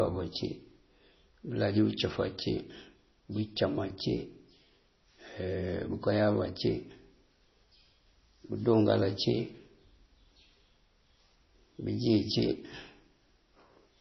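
Throughout, the speech loses everything above 5.9 kHz and swirls watery, sounding likely like heavy MP3 compression at roughly 24 kbps; a plain low-pass filter would dull without that flickering.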